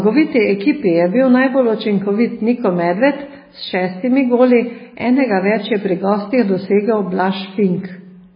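Throughout the speech, heavy damage points to likely MP3 compression at a very low bitrate, around 16 kbps. Nothing remains above 5 kHz, so the sound is dull. Weak frequency lines flicker on and off between frames. That makes a watery, swirling texture.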